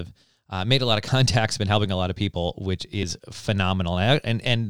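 Audio missing between chunks at 1.08 and 3.03 s: the speech skips abruptly, about 50 ms lost each time, likely where a 2-second recording chunk closed and the next began.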